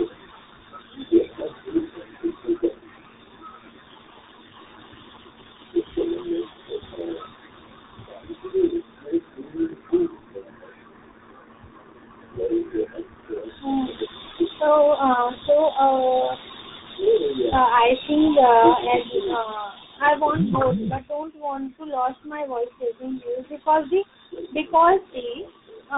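Throughout, tandem speech coding passes the speech through two codecs in a row. The chain sounds like a CVSD stage, leaving speech rough, muffled and warbly, with nothing above 3.8 kHz.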